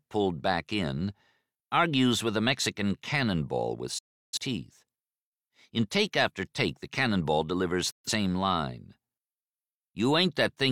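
Digital broadcast dropout hits this speech clip twice, from 3.98 to 4.38 s and again from 7.91 to 8.10 s. Each time the sound fades to silence within about 8 ms and comes back later in the programme. The receiver stopped getting usable frames and muted until good ones returned, so the speech sent in those gaps is simply gone. The first hole, about 341 ms, fits a run of roughly eight lost frames. The second, 128 ms, fits about three.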